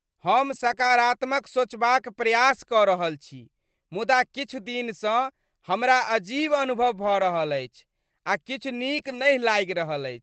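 Right at 0.51 to 0.73 s there's a lost packet rebuilt from error correction. The audio doesn't drop out, but for about 120 ms it turns grainier and noisier. That's the decoder playing the low-bitrate backup copies that rode along in the following packets, rather than the originals.

From 0.75 to 0.89 s a short concealed packet loss follows that. Roughly 20 ms of audio never arrived in time, and the receiver stretched the preceding sound across about 14 ms of it before easing back into the real signal. You hear a quick smear or wobble, and it adds a small delay of around 15 ms.

More error-correction rebuilds follow at 0.79 to 0.90 s, 2.50 to 2.56 s, 7.20 to 7.22 s and 8.94 to 9.28 s. They cover about 60, 40, 20 and 180 ms of sound respectively, each a patch of rougher, fizzier texture with no actual gap. Underneath all of it, the Opus call path's band limit tops out around 8 kHz.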